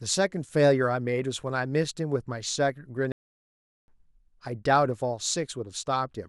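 Speech clip with a playback stall from 3.12 to 3.88 s: waveform flatlines and spectrogram goes blank for 0.76 s, likely a player starved of data.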